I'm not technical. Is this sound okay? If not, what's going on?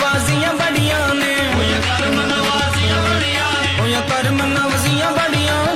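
No. GSM phone buzz from 1.59 to 3.20 s: a nearby mobile phone sending data pulses 217 times a second, and the audio circuitry picks them up as a harsh, stuttering rasp.

Compressed frames skipped at 3.58 to 3.63 s: chunks of the compressed file were lost or rejected, so playback leaps ahead about a fifth of a second.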